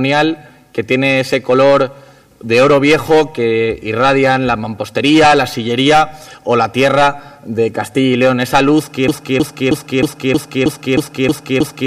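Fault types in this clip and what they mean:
broken-record loop: from 9.08 s to the end, a 315 ms fragment repeats nine times back to back, likely a stalled player or stream resending its last buffer.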